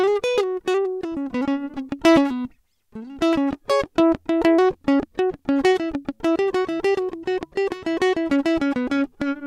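Nothing in this music clip stands out as a technical fault, so there's nothing to flag here.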